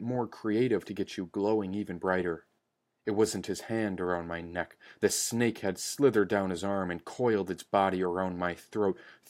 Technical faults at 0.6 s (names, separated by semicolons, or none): clock slip clicks